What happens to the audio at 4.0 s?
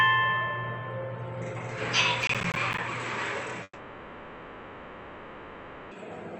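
Likely a long network dropout, from 3.63 to 5.93 s. The missing audio is filled by a fading buzz or hiss, which shows as smeared, decaying spectrogram bands and a shrinking waveform.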